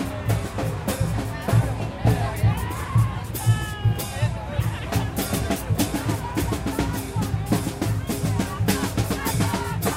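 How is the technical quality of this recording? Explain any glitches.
No technical glitches can be heard in this recording of sounds. Nothing in it calls for explanation as a fault.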